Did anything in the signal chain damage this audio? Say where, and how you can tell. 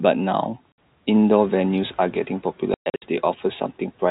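Yes. At the network stage, packet loss filled with silence cuts the speech at 0.72 to 0.78 s (60 ms) and again from 2.74 to 3.02 s, where 220 ms is lost in scattered gaps, the longest 120 ms. On a waveform these show as flat dead lines with abrupt edges, which fits 20 ms packets.

In call processing, the noise suppressor is catching up after the room noise jumps around 1.5 s. From 1.41 to 2.32 s the spectrogram's noise floor starts bright, then darkens by about 7 dB over 910 ms as the estimate adapts.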